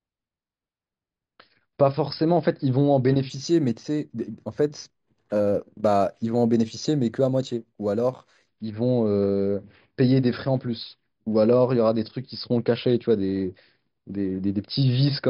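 Speech clip with imaging from linear upsampling between 3.30 and 8.48 s. Straight-line interpolation, consistent with an 11 kHz rate raised to 44.1 kHz, dulls the top and leaves a mirrored image at 5.5–11 kHz, roughly 25 dB down, which sounds like a faint metallic shimmer.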